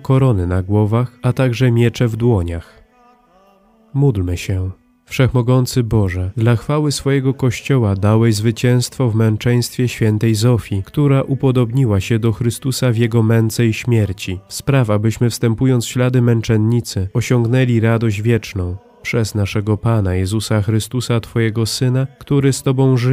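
No technical faults are audible anywhere in the recording.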